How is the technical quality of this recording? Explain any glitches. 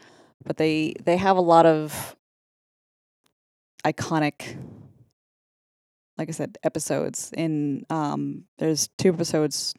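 The recording has no audible technical glitches; the signal stays continuous and steady throughout.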